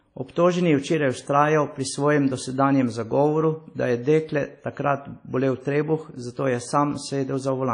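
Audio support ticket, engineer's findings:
WMA compression, throughout. Speech sounds ringing and washy, with hiss breathing alongside the voice; nothing above 10.1 kHz. Likely a WMA transform encoder at a low bitrate, consistent with 32 kbps, zeroing weak spectral lines and smearing quantisation noise across long blocks.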